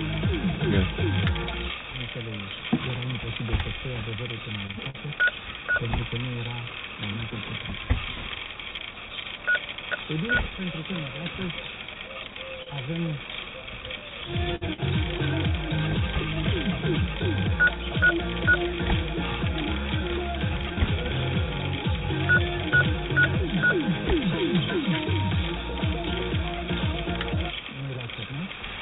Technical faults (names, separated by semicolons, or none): repeated packet loss (robotic sound); scattered short gaps; jitter buffer speed-up